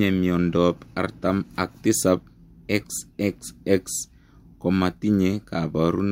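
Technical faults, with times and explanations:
Nothing stood out as a technical problem on listening to this speech recording.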